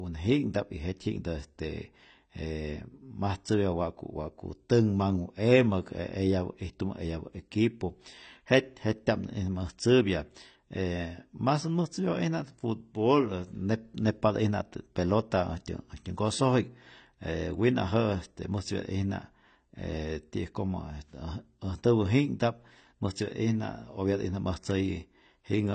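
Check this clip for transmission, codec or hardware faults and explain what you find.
The speech carries a codec fault from start to finish, most likely AAC compression. Nothing reaches above 8.6 kHz, and the damage is plainly audible. A low-bitrate AAC-LC encode, consistent with roughly 24 kbps, lowers the band limit and quantises frequency lines coarsely, leaving holes in the spectrum. That produces a dull, smeared tone with a warbling, fizzy texture on sustained sounds and sibilants.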